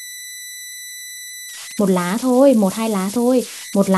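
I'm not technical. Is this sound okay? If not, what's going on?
No, it isn't clean. Throughout the recording, from start to finish, there is a whistle at around 2 kHz, a fairly high pitch, plus a grainy hiss under the quieter parts of the speech. These are converter idle tones. The device that turned the sound into digital data got stuck repeating small patterns whenever the level was low, because no masking noise was added to break them up. Those repeating patterns come out as this whistle.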